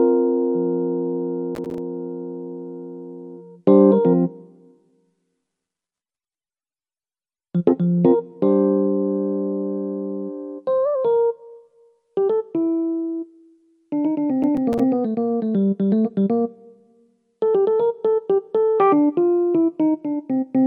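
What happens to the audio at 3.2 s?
Nothing goes wrong at 3.2 s; the sound plays through that moment intact, with no dropout, click, distortion or other fault.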